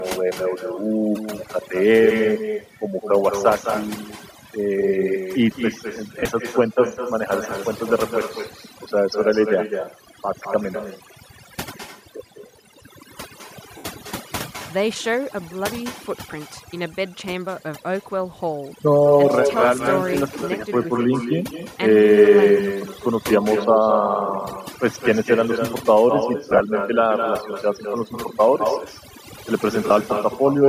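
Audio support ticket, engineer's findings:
Overdone noise removal, throughout. Noise suppressor set too aggressive; it cuts individual frequency bands whenever they sit near its noise estimate, taking the quieter parts of speech with them. Result: background pulled down, breaking up into twinkling specks.

Echo with no canceller, throughout. Far end on loudspeaker, mic picking it up, no echo cancellation in the path. Talker hears own speech return after the network round trip, around a fifth of a second late, about 7 dB below the direct signal. Every phrase trailed by a quieter, thinner copy.

Lost LE Audio frames, four events. Bluetooth LE Audio link dropping frames; decoder repeats the last spectrum with randomised phase, fading it as the loss continues. Heard as brief noisy smears in place of clean tone.
6.18 to 6.26 s: 60 ms lost, scattered over 75 ms, longest gap near 30 ms.
13.77 to 13.85 s: 67.5 ms lost, fits roughly nine 7.5 ms frames.
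26.50 to 26.61 s: 60 ms lost, scattered over 105 ms, runs short, around 15 ms.
29.87 to 29.90 s: 30 ms.
Concealment timing consistent with 7.5 ms LC3 framing. The LC3 codec itself likely accounts for a faint grainy edge.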